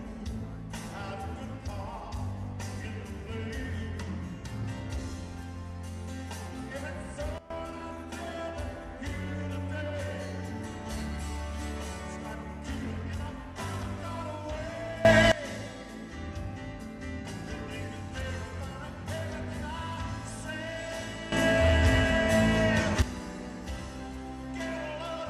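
A digital gain setting was likely switched without a ramp, producing sudden gain jumps in which the sound and its background noise change level together, instantly, in three places. From 7.38 to 7.50 s the level drops by about 15 dB. From 15.05 to 15.32 s it rises by about 18 dB. From 21.32 to 23.02 s it rises by about 12 dB. Each step reverses just as abruptly when the span ends.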